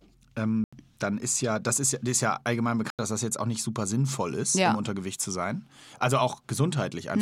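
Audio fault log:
0.64 s and 2.90 s, block of digital silence: speech drops abruptly to silence for about 85 ms each time, fitting an unfilled 4096-sample buffer.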